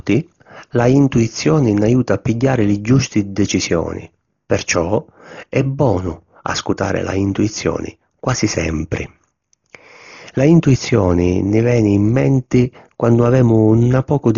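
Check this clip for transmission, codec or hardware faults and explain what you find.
One codec fault runs through the entire clip. Throughout, the speech is dull, with nothing above 7 kHz and rough, fluttering noise around tones, likely from heavy Dolby Digital compression at a very low bitrate near 32 kbps, which leaves many frequency lines filled with dither noise.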